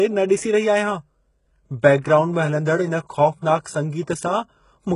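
Throughout the speech, heavy codec damage is heard, with nothing above 11.1 kHz, likely from HE-AAC compression at a very low bitrate, consistent with about 12 kbps. Treble rebuilt from copied lower bands makes s sounds gritty and metallic. A spectrogram shows blocky, repeated-looking upper bands ending abruptly at 11.1 kHz.

At 2.01 to 2.04 s, pre-echo spreads a short hiss across roughly 34 ms ahead of a sharp attack, because the block's quantisation noise fills the quiet lead-in. The onset sounds softened, and the waveform shows low-level noise rising before the transient.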